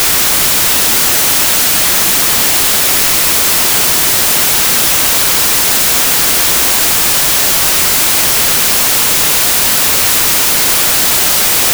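Loud hiss and crackle cover the entire speech recording, with the speech buried underneath at half speed and an octave low. It's a wrong sample width fault. Audio stored as 32-bit integers is read as 16-bit, so each real sample splits in two. Only the upper halves keep the signal, and the lower halves become noise.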